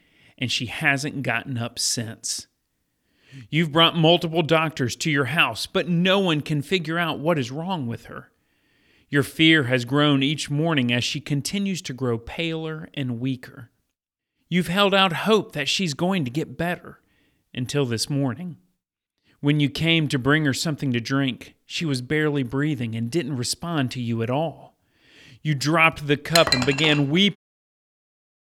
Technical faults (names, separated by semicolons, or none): none